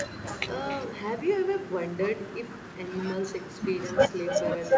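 Echo with no canceller runs throughout: the far end's loudspeaker feeds its microphone, returning each phrase about a third of a second later, about 12 dB quieter. The call path's band limit at 8 kHz is also audible, which fits G.722.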